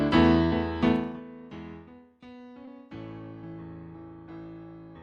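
At 0.45 to 0.53 s there is a burst of packet loss. About 60 ms of audio failed to arrive in time, and the receiver extended the preceding sound for roughly that long while fading it down. The stream then resumes slightly ahead, with about 60 ms of the original sound skipped.

At 2.65 to 2.69 s a short concealed packet loss occurs. About 20 ms went missing, and the decoder patched it with roughly 15 ms of extrapolated sound blended back into the real audio, heard as a brief smear or wobble.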